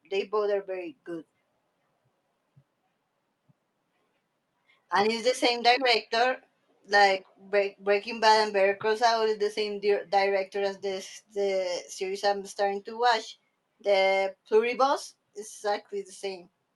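No technical faults are present in this speech clip, and the only background is the room's own noise, sitting about 54 dB below the speech.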